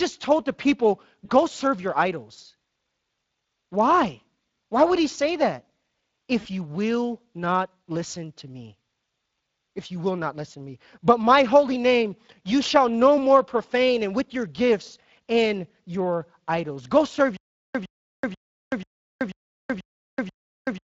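Speex codec damage is plainly audible through the whole clip. At this bitrate, which sounds like something around 20 kbps, the CELP coder doesn't have enough bits for the excitation signal. The result is that the speech has that noisy, hoarse texture typical of older VoIP or game chat. The top end, rather than carrying real detail, is filled with a shaped, noise-like layer.

At 1.25 to 1.31 s, right after "told the people" and just before "serve your idols", there's VoIP packet loss concealed by the speech codec. About 40 ms went missing, which fits two 20 ms frames. The decoder bridged the gap by extending its last pitch and filter state with decreasing gain, so you get a brief smeared, fading stretch.

The same thing happens again at 6.39 to 6.47 s, just before "you will not listen". This time it's about 60 ms, roughly three frames, so the extrapolated sound drags on a bit longer. Because each frame depends on the one before, the speech stays weak or distorted for a moment after real packets resume.

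From 17.37 s to the end there's a stutter with silent gaps, likely from the player or stream stalling and replaying its last buffer on each retry. A 108 ms fragment repeats seven times, once every 487 ms, with about 380 ms of silence between repeats. Whatever audio should have played after that point is gone.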